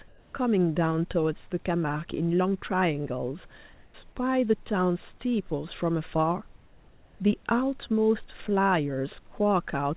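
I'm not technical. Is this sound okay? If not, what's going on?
No. Comfort noise replaces the background twice, from 0.08 to 0.34 s and from 3.74 to 3.94 s. In those short pauses the real room sound disappears and a smooth, featureless hiss takes its place. The likely cause is the call system pausing transmission when nobody is talking; the receiving end then fills the gap with made-up noise roughly matching the room. In the first gap it comes out slightly louder than the real background.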